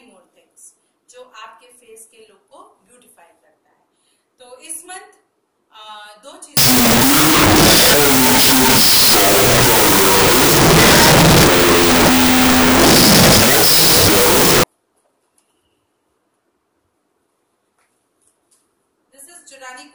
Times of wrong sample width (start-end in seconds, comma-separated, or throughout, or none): 6.57-14.64